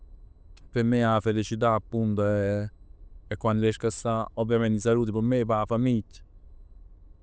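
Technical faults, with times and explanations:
Throughout: aliasing. The speech was brought down to a lower sample rate without proper filtering first. The content stops hard at 8 kHz, which fits a conversion from a 44.1 kHz source to 16 kHz. Energy that sat above 8 kHz has folded back below it as unrelated, inharmonic tones roughly 25 dB under the signal. This gives sibilants a gritty, metallic edge, and the spectrum runs right up to the band edge instead of rolling off.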